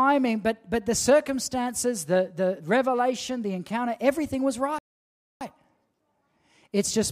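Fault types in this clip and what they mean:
Rebuffering stall: playback runs dry at 4.79 s, holds silence for 0.62 s, then resumes at the exact point it stopped, so no speech is lost.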